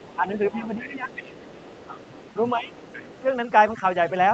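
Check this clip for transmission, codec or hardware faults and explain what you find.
Yes, there are a few problems here. The top end stops at around 8 kHz, which is just the normal limit of an Opus call path.

Overdone noise removal runs through the whole clip. The noise reducer is clamping frequency bands hard whenever they sit near its noise estimate, so the background collapses into near silence with little twinkling specks. It takes the quieter bits of the speech with it. That's a suppressor pushed well past where it should be.

The other side's voice leaking through shows up four times: 0.0 to 0.18 s, 0.5 to 0.65 s, a long stretch from 1.09 to 2.5 s, and 2.73 to 3.2 s. It's a faint second voice, about 25 dB under the main speech in the first bit and about 20 dB under in the rest. The likely cause is a loudspeaker on the talker's device feeding the mic, with the echo canceller missing part of it.

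Speech suppressed in double talk lines up with those leaks. The main voice dips by about 5 dB from 0.15 to 0.27 s, by about 10 dB across 0.52 to 1.13 s and again at 2.55 to 2.72 s, then gives a brief small dip around 3.21 to 3.25 s. Likely the echo canceller couldn't separate the local talker from the loudspeaker echo while both were active, so it ducked everything together.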